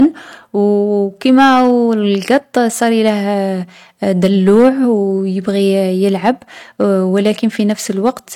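Throughout the speech, the loudest peaks carry a brief crackle and gritty edge, the sound of hard clipping. The signal was driven about 5 dB beyond what one stage could pass, so around one percent of samples had their tops sheared flat, spraying harsh high harmonics.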